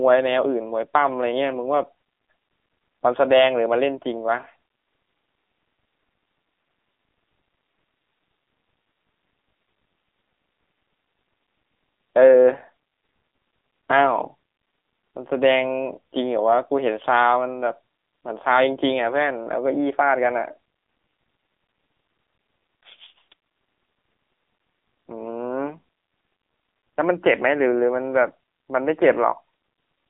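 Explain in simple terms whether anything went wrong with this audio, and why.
The speech went through an AMR narrowband mobile codec for the whole recording, so it sounds like a phone call: nothing above 3.6 kHz and thin below 250 Hz. Unlike a simple phone-line filter, the squeezed encoding also makes it audibly buzzy and synthetic.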